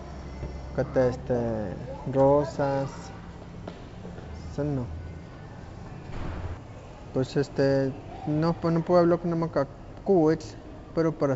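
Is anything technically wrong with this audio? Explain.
Yes. From 0.40 to 0.51 s the speech breaks into pops and a short rough, gritty burst with brief jumps in level. These are bit errors on an ADPCM link. A sparse scattering of flipped bits, around one in a thousand, corrupts the G.722 stream. Each one throws off the decoder's step size and predictor, so the damage rings on for a few milliseconds instead of staying a single click. The spread of the disturbance points to four frames being hit.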